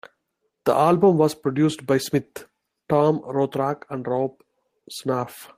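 No technical faults can be heard anywhere in the recording.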